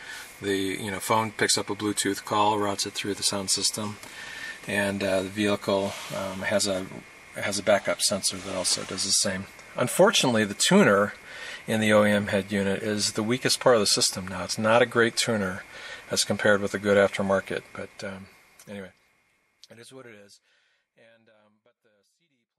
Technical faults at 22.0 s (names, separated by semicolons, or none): none